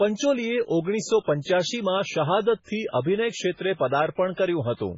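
Running through the whole recording, a starved encoder is heavily damaging the signal, likely MP3 compression at a very low bitrate, with damage heavy enough to point to something around 16 kbps. With so few bits, the encoder cuts everything above 7.6 kHz and drops quieter frequency lines that flicker in and out between frames. The speech sounds dull and muffled, with a watery, swirling texture, metallic chirps on sibilants, and blurred onsets.

From 1.41 to 1.46 s, the codec's block-based processing produces pre-echo. A sharp attack lands late in a transform block, so the quantisation noise spread evenly across that block also fills the quiet stretch before it. About 46 ms of hiss can be heard leading into the attack, and the attack itself loses its crispness and sounds smeared rather than cleanly struck.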